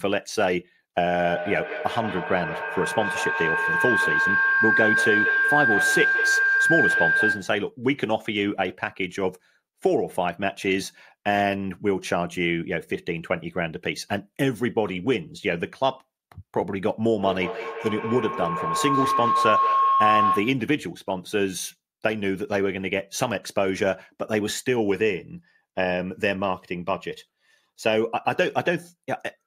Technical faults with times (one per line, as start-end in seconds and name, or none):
1.17-7.65 feedback howl
17.13-20.68 feedback howl